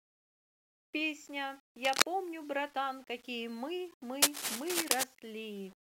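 The speech was likely requantized to very few bits without dither, which fits 9-bit rounding. Grainy distortion follows the sound throughout, roughly 30 dB below the speech. From 4.22 to 5.04 s, cable scratch noise, likely from a worn cable or connector being moved, adds dense, uneven scratching that sits louder than the speech itself.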